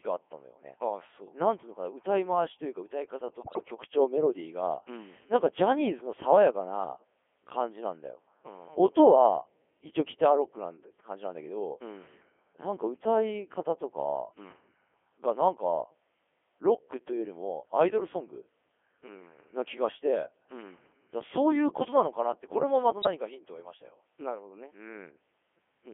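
From start to finish the speech passes through the Codec 2 vocoder, held to a 300 Hz to 3.4 kHz band, and the heavy buzzy, robotic tone fits its top 3.2 kbit/s mode. Unlike an ordinary low-bitrate codec, it rebuilds the voice from sine waves driven by pitch, voicing and envelope data, so none of the original waveform is kept.

Bit errors on digital voice radio strike from 3.40 to 3.68 s and again from 23.02 to 23.09 s, the second burst denser, around several percent of bits flipped against about three percent in the first. Corrupted parameters make the synthetic voice jump in pitch and level and break into warbling bleeps. Packet loss would leave gaps or smeared repeats instead.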